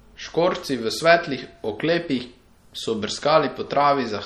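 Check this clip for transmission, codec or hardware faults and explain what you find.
There's one problem, and it runs the whole way through: MP3 compression, likely from a low-bitrate encode, something around 48 kbps judging by the damage. Weak frequency lines flicker in and out between frames, so the speech sounds watery and swirly, with chirpy s sounds and softened attacks.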